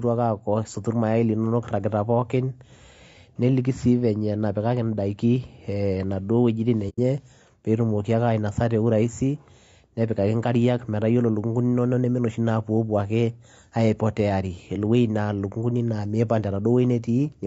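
It's a speech clip, and the whole thing has that rough, grainy edge you get from low-delay AAC compression. The likely culprit is AAC-ELD, the video-call flavour of AAC, at a bitrate that sounds like about 32 kbps. Its short frames can't pin down the pitch harmonics well and eat up bits, so at this rate you get noise filling in between the harmonics, and the damage is plainly audible throughout. There's also AAC frame loss with muting from about 6.89 s to 6.99 s. The decoder zeroed out the missing spectrum, so the sound fades out and comes back in through the overlapping windows rather than cutting hard. The result is a soft-edged hole, and its length fits roughly three lost frames.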